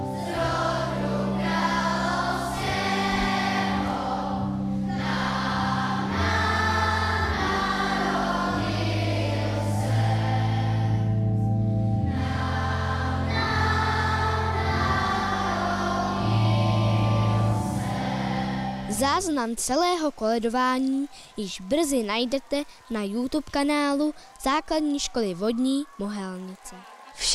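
Nothing in this audio calls for a technical complaint, so there's no fault to point to here.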